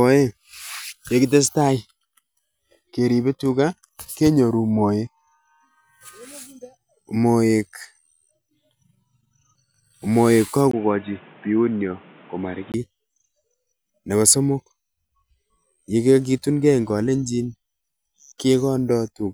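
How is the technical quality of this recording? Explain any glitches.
One glitch is audible. From 10.71 to 12.74 s, the input switched to a poorer device, likely a change of microphone. After a 20 ms gap, the speech loses everything above 3.8 kHz and turns dull, with new background noise about 30 dB down.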